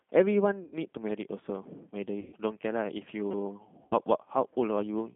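A short speech recording carried over a narrowband telephone-style link, with G.729 codec damage throughout. The audio is confined to roughly 150 Hz to 3.5 kHz, with no content above the cut-off, and the voice has the rough, slightly synthetic quality of a low-rate coder that rebuilds each 10 ms frame from a vocal tract filter, a pitch predictor and a handful of pulses. The character is consistent with an 8 kbit/s G.729A coder. VoIP packet loss concealed by the speech codec occurs three times: 0.64 to 0.74 s, 2.20 to 2.35 s, and 3.83 to 3.95 s. The gaps amount to about 80 ms, 120 ms and 80 ms of missing audio, which fits runs of four, six and four 20 ms packets. In each gap the decoder extends its last pitch and filter state, so the sound turns into a fading buzzy tone or coloured noise, and the voice stays weak and distorted briefly after the stream resumes.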